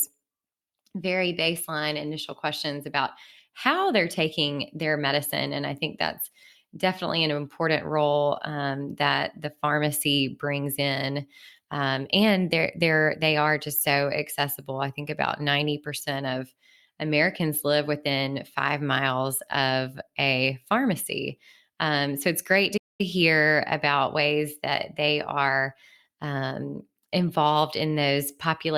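At 22.77 s the speech stops in mid-flow and silence holds for about 220 ms, until 23.01 s, when the sound comes back. This is a playback stall, likely caused by the player running short of data or its thread being blocked, so nothing reached the output until it recovered. A brief dropout lasts only milliseconds. This gap is long enough to be heard as a distinct hole in the flow of the speech.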